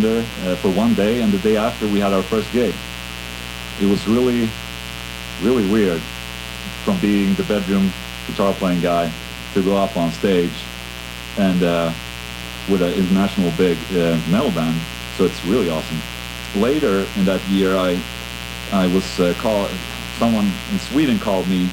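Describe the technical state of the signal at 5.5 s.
At 5.5 s there's mains buzz, and it runs the whole clip. Sharp switching spikes from something like a dimmer or an unshielded line land twice per 60 Hz cycle, spraying harmonics into the kilohertz range. You get a steady, raspy buzz, sitting fairly loud, not far under the sound itself.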